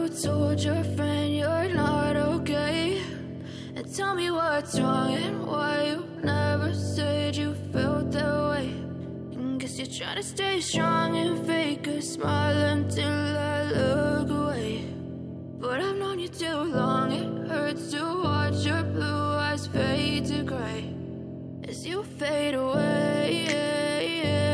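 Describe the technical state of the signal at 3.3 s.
At 3.3 s the signal is intact, with no dropout, distortion, glitch or other fault audible at that moment.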